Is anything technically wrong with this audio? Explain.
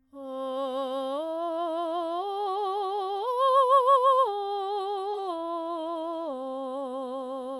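Yes. At 5.13 to 5.18 s the music has AAC frame loss with concealment. For about 43 ms, roughly one frame's worth of audio, the decoder had no valid data. It rebuilt that stretch from the last good frame's spectrum, keeping the energy but not the true phase or fine detail. The result is a brief smeared, noisy and phasey patch where transients and tonal clarity blur before normal decoding resumes.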